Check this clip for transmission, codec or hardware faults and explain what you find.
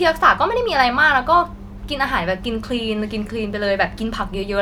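Nothing stood out on listening to this speech recording.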